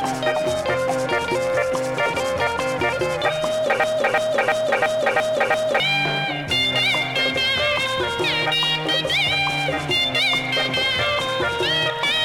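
A broken-record loop runs from 3.84 to 5.80 s, one 0.34 s fragment repeating six times, likely from a stalled stream resending its last piece.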